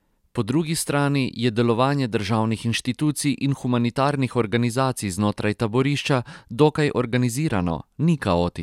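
No technical faults can be heard anywhere in the recording.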